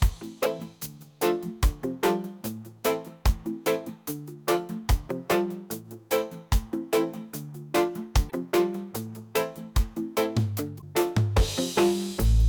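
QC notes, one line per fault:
0.41–0.46 s, 8.27–8.32 s and 10.78–10.83 s: damaged data in a compressed stream. Each is a brief glitch, as the decoder misreads corrupted frames and resyncs.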